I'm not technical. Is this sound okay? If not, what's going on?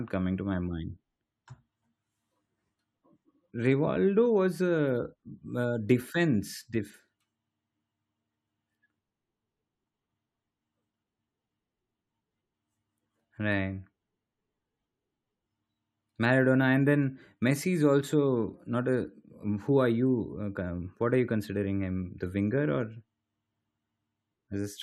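Yes, this sound is okay, with nothing going wrong in it.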